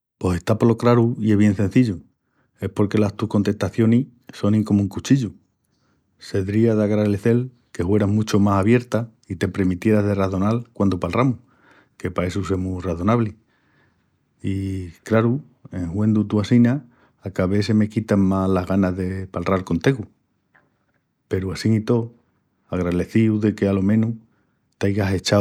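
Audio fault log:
Nothing to log here; no faults turned up anywhere in this speech recording.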